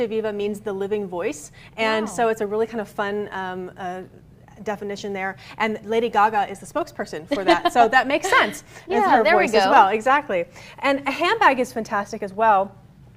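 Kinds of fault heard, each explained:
No technical fault can be heard in the audio.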